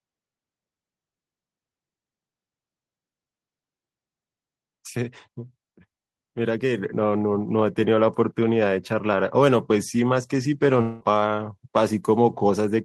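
At 6.78 s the level jumps by about 5 dB in a single step: the microphone volume is stepped up. Call software judged the input too quiet and raised the device's input gain at once. What separates this from a speaker simply talking louder is that the background noise floor rises by the same amount at the same instant and then stays there, rather than only the voice growing stronger.

From 10.81 s to 11.03 s the sound stops being speech and turns into a buzzy, smeared continuation of the last sound that fades for roughly 0.19 s, with no gap of true silence. Normal speech then resumes, but about 0.2 s of it is simply missing. This is a long network dropout, likely caused by packets failing to arrive. Unlike a brief packet-loss glitch, the concealment runs long enough to be heard decaying.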